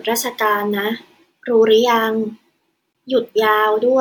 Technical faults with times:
2.92-2.94 damaged data in a compressed stream

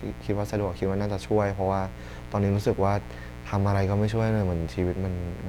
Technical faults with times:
0.00-5.49 mains buzz

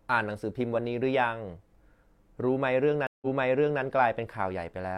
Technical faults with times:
3.07-3.82 stream reconnect

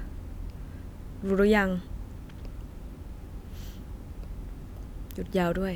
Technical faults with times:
none

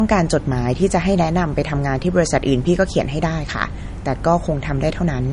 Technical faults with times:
0.00-5.33 low-bitrate audio saved at a high bitrate

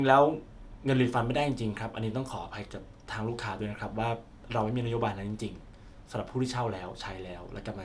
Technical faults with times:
none

